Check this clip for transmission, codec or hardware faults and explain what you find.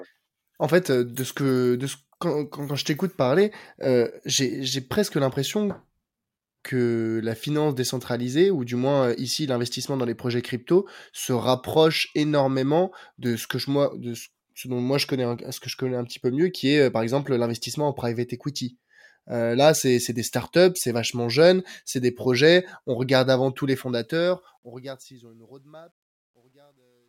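One fault stands out, on the closing fade-out of this speech clip.

Truncation distortion on a fade, 23.77 to 27.09 s, after "regarde avant tous les": the fade stage kept too few bits without dither, fitting about 11 bits, so from 25.25 s the fading level turns gritty.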